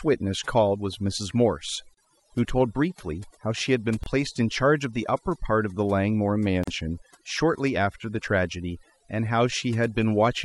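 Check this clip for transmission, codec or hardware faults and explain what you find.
Two faults are present: overdone noise removal across the whole clip, and three gaps at joins of encoded pieces.

The overdone noise removal runs throughout. The reduction is set so aggressively that frequency bands close to the estimated noise floor are pulled down or cut entirely, taking quieter speech components with them. The background collapses to near silence flecked with twinkling artefacts.

Gaps at a join of encoded pieces open at 1.94 s (about 30 ms), 4.04 s (about 27 ms) and 6.64 s (about 40 ms). Each segment was encoded separately, so the encoder's start-up delay and the padded final frame remain at every join. Speech drops out abruptly with smeared edges, then resumes where it stopped.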